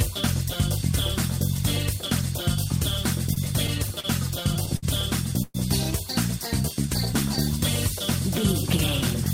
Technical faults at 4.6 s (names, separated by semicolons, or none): repeated stalls (stutter)